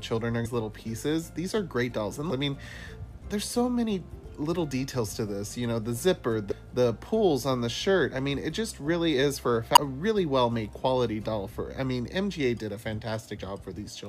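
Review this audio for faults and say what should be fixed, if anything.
Damaged data in a compressed stream at 0.44–0.46, 2.30, 6.50–6.53 and 9.75 s: corrupted frames make the decoder lose sync, producing brief glitches. Fix it by adding per-frame checksums and error detection so corrupted frames are caught and resent or concealed before decoding.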